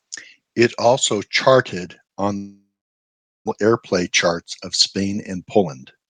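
At 2.37 s, just after "also charted on", the speech breaks off until 3.50 s. The last sound is stretched into a short fading buzz. Then there is near silence, lasting about 0.8 s. When the speech returns, roughly 0.6 s of it is gone for good. This is a long network dropout. The likely cause is a run of packets that never arrived in time. The delay afterwards is about half a second longer.

From 4.97 s to the end at 6.09 s, the speech runs about 20% fast. The pitch stays the same. This is a jitter buffer speed-up. The buffer held more audio than it wanted after the gap. To catch up, it cut many tiny pitch-period pieces in a row, around a fifth of a second in total. The talking sounds rushed. The call codec's top end stops near 12 kHz.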